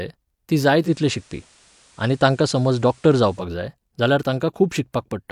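At 0.81 s the speech blends from digital radio to analogue. The receiver loses the digital stream and, over about 0.1 s, cross-fades to the station's FM broadcast. A faint hiss, roughly 35 dB below the signal, rises underneath, and the level shifts by about 2 dB. At 3.46 s the receiver fades back to the digital signal, clearing the hiss.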